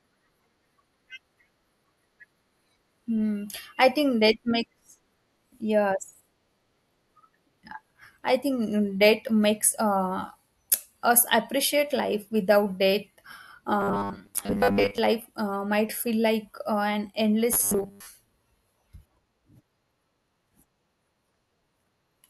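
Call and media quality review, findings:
Robotic sound from repeated short buffers, 13.80–14.98 s (just before "life uh might feel") and 17.53–18.07 s. Rigid metallic 100 Hz buzz over speech; likely jitter-buffer underrun looping roughly 10 ms chunks, replacing most real audio.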